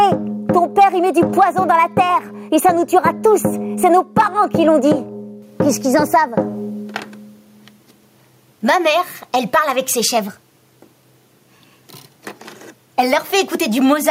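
Gain pumping runs through the whole clip: the gain is pulled down on each loud sound, with a swing of around 10 dB. The likely cause is gain set far too high, with a fast limiter clamping each peak. Unlike a noise gate, which drops the gaps to silence, the limiting here brings loud and soft parts closer in level.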